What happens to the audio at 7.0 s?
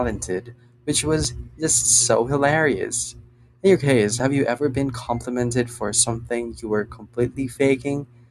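Nothing goes wrong at 7.0 s; the audio is intact at that point.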